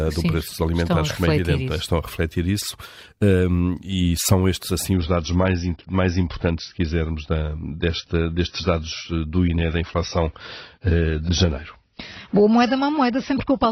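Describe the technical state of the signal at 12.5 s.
At 12.5 s the speech sounds dull, with nothing above 6 kHz and more codec artefacts. This is an adaptive stream at a lower bitrate, running from 4.93 s, just after "e são estes assim", to the end of the clip. When the connection slowed, the player switched abruptly and without a gap to a leaner AAC version. The sound fits a drop from about 96 kbit/s to 24 kbit/s, forcing the encoder to discard the treble and quantise harder.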